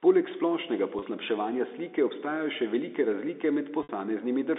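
At 0.99 s, 30 ms of speech drops out. Packet loss with pitch repetition fills it, giving a brief buzzy hold. At 3.83 s, after "obstajajo še velike razlike", a 60 ms gap fades toward silence. Both sit on a telephone band.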